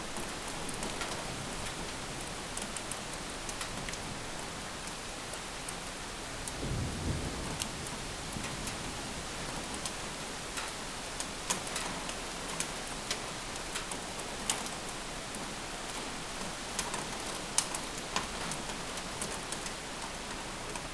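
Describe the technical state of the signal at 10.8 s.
At 10.8 s the signal is intact, with no audible fault at that moment.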